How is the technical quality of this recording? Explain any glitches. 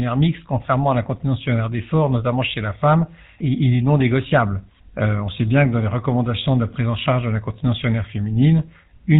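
The recording is degraded by narrowband codec coding. From start to finish, GSM full-rate codec damage is plainly audible. The speech is cut off above 4 kHz and has a buzzy, gravelly roughness, consistent with 13 kbps GSM coding. That roughness comes from modelling the vocal tract and exciting it with sparse, regularly spaced pulses.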